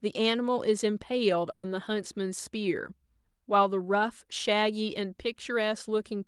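At 1.51 to 1.66 s a burst of packet loss hits the speech: about 120 ms is missing, concealed by the last sound extended into a fading buzz or hiss.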